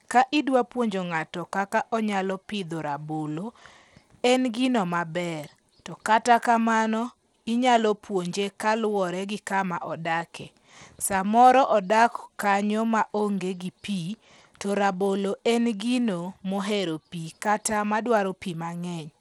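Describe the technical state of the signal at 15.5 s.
At 15.5 s, as throughout the speech, the treble flickers in and out over a gritty, aliased noise, most likely Bluetooth SBC compression at a bit budget near 96 kbps. Upper sub-bands starved of bits cause this, unlike the steady, clean edge of a simple low-pass filter.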